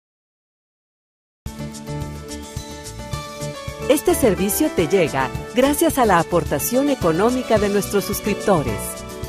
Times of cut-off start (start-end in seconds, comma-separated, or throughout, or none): 0.00-1.46